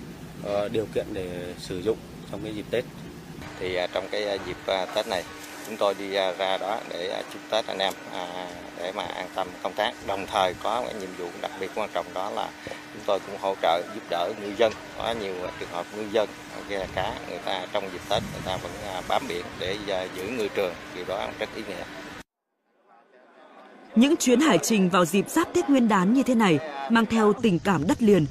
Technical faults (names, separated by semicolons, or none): none